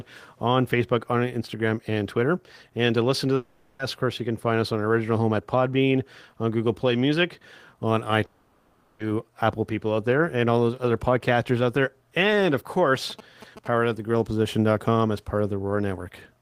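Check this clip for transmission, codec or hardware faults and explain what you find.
Three faults are audible in this speech clip: two gaps where the audio is lost, and one burst of mobile-phone interference.

The first gap runs from 3.35 to 3.81 s, right after "to listen to" and before "of course you can". The second runs from 8.25 to 9.01 s. In both, the last sound smears into a fading buzz and hiss. Then the speech resumes with a piece missing. The cause is likely a long network dropout. Packets stopped arriving, and the receiver filled the whole 440 ms and 740 ms with its own concealment. Nothing real arrived in either stretch.

From 12.95 to 13.68 s, just before "at the grill", there are GSM signalling bursts. A nearby 2G phone was talking to its network and sending short groups of radio bursts. The audio circuitry rectified them into sound. You hear a galloping dit-dit-dit of short 217 Hz buzzes. 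They sit roughly 15 dB below the speech.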